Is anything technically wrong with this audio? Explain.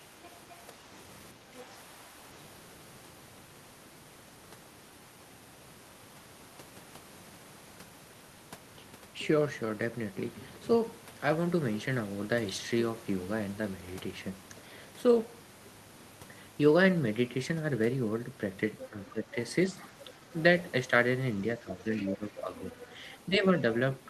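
Yes. This speech clip shows two echo-canceller faults, and they overlap in places.

Other side's voice leaking through appears at 0.23–0.53 s, 1.56–1.60 s, 18.78–19.11 s, 19.80–20.34 s and 21.97–23.20 s. A faint second voice sits under the talker, mostly about 25 dB down, but nearer 15 dB below at 18.78 s and about 20 dB below in the last stretch. Its likely cause is loudspeaker playback reaching the microphone and only partly cancelled. On a spectrogram it shows as weak harmonic traces that don't line up with the main voice.

Speech suppressed in double talk occurs at 1.34–1.69 s, 18.90–19.29 s and 21.59–23.44 s, each time around the leaking voice. The talker dips by about 5 dB in the first case and by up to about 10 dB later, with the affected portions adding up to about one second. This is likely the canceller treating simultaneous talk as echo and turning everything down. On the waveform the envelope sags or notches abruptly.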